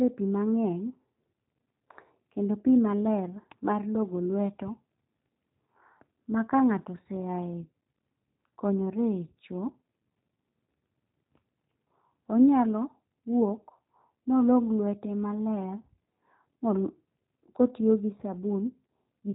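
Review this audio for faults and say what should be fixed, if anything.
Throughout the recording the speech sounds rough and slightly synthetic, with a buzzy, processed edge and no content above 4 kHz. Consonants like s and f lose their crispness. These are G.729 codec artefacts, plainly audible here. The codec rebuilds each 10 ms frame from a vocal tract filter, a pitch predictor and a few pulses, and discards the top band, which fits an 8 kbit/s G.729A stream. To prevent this, record or route the audio through a wideband or higher-bitrate codec, or capture it locally before it reaches the VoIP path.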